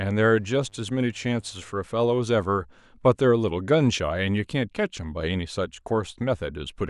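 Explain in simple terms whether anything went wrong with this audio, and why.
A mains buzz sits under the speech from 0.32 to 1.82 s: a faint, raspy, steady drone tied to the 50 Hz power supply. Electrical switching spikes leaked in, so unlike a smooth, low mains hum, it carries bright, edgy overtones.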